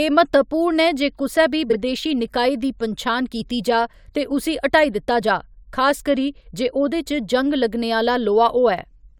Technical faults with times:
1.70-1.75 frames out of order

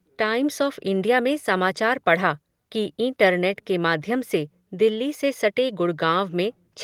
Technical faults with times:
none

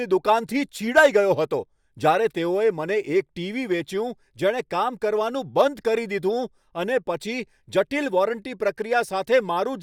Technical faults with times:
none

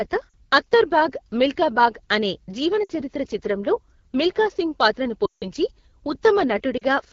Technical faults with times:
0.00-7.12 AMR wideband (HD Voice) codec
0.30-0.34 lost AMR speech frames
2.84-2.92 lost AMR speech frames
5.25-5.44 lost AMR speech frames
6.77-6.84 lost AMR speech frames

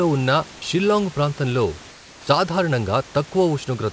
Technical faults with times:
1.91-2.27 comfort noise in place of the background

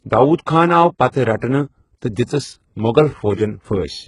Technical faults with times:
0.00-4.08 HE-AAC compression

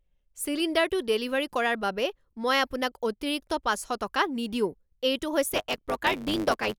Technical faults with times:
5.52-6.78 block size mismatch (truncated)

